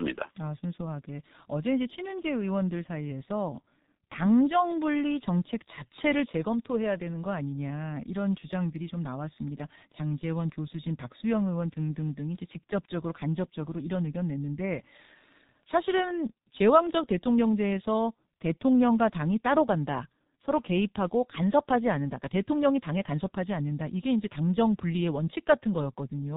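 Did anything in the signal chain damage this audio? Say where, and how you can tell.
Yes, the codec stage. The whole clip sounds like the G.723.1 codec, with heavy damage: speech is muffled with nothing above 4 kHz, hoarse, and consonants smear. That fits roughly 6 kbit/s coding in 30 ms frames, with a voice model updated too slowly to track fast changes.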